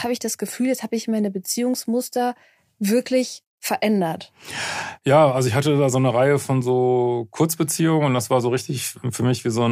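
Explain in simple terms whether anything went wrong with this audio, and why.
Nothing went wrong with this recording that a listener can pick out. The speech comes through steadily, with no dropouts, clicks or sudden changes in the sound.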